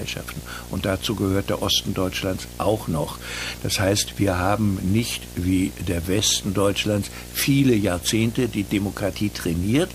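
A video or display buzz runs through the whole recording: a screen or video cable is leaking its scanning signals into the audio path. The picture's field refresh at 59.94 Hz arrives as a steady low buzz with a gritty hash riding above it, and the horizontal line scan adds a thin, piercing tone at 15.7 kHz. The interference is loud, only about 10 dB below the wanted sound, so it sits clearly on top of everything.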